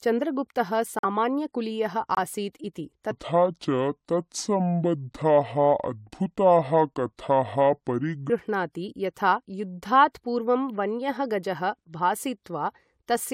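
At 0.99 to 1.04 s and again at 2.15 to 2.18 s, the speech drops abruptly to silence: corrupt frame muted, with gaps that fit two rejected frames each, timing preserved. From 3.11 to 8.30 s, a section at the wrong speed plays at 0.653 times normal, pitching the speech about seven semitones lower and slower, likely from a clock mismatch.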